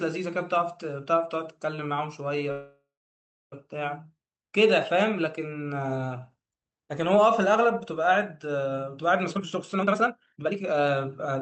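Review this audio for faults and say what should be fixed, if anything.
A call audio freeze runs from 2.51 to 3.54 s. The sound stops mid-stream and the last fragment is stretched into a fading buzz, ending in about 640 ms of silence. The most likely cause is packets held up in transit until the jitter buffer ran dry. When audio resumes it continues from where it stopped, so roughly a second of gap is inserted and nothing is lost. To prevent it, fix the network delay spikes on this route or allow the jitter buffer more headroom.

A jitter buffer speed-up runs from 9.26 to 11.36 s. The speech plays at about 144% speed with its pitch unchanged and sounds noticeably hurried. The receiver was holding too much audio, most plausibly the backlog left after the freeze. It cut short pitch-period slices many times in a row and removed around a second in total. The Opus call path underneath keeps its usual coding noise and an 8 kHz bandwidth limit. 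To prevent it, limit how aggressively the buffer drains, so the delay is recovered more gradually.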